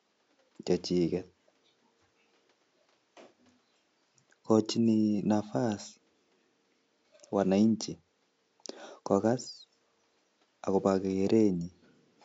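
No technical faults can be heard anywhere in the speech. A faint room noise sits underneath it, about 48 dB below the speech, and belongs to the recording space rather than the system.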